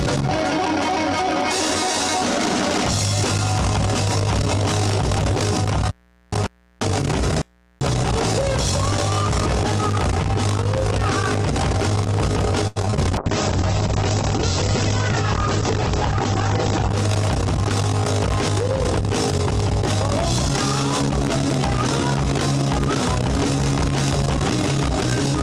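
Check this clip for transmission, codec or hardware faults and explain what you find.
Two transmission faults show up close together, a burst of packet loss and then a drop in call quality.

From 12.67 to 12.99 s there's repeated packet loss, giving that robotic sound. About five quick holes land in a third of a second. Each gets patched by stretching the previous sound, around 140 ms of fill in total, with about 80 ms simply gone and the longest gap near 85 ms. It comes across as choppy and robotic.

Right after, from 13.19 to 16.97 s, there's a call bitrate drop. The encoder was pushed down to a much lower rate, which fits a fall from roughly 48 kbps to around 10 kbps, so it coded coarsely and the top end was cut from 20 kHz down to 8 kHz. The audio turns muffled and rough for those nearly four seconds.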